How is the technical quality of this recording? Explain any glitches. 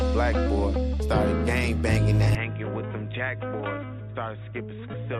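The recording has two faults, both after the 2.3 s mark.

From 2.35 s to the end, the input likely switched to a poorer device, such as another microphone or a headset's call mode. There is no gap at the change. The sound suddenly turns dull and boxy, because nothing above 3.8 kHz gets through. The level drops by about 10 dB. A new background noise appears, roughly 40 dB below the signal. The narrower band and the different noise floor suggest different hardware.

From 4.93 to 4.95 s there is damaged data in a compressed stream. Some of the encoded bytes there were corrupted. The decoder could not read those frames correctly. It lost sync and had to search for the next valid frame header. The result is a brief chirp or blip of about 20 ms.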